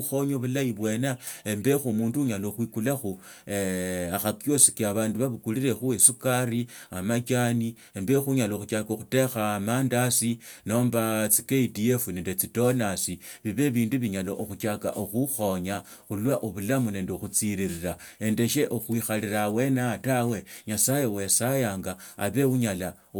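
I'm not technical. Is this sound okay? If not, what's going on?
Yes, nothing in this speech recording points to a technical problem with how the signal was captured or delivered.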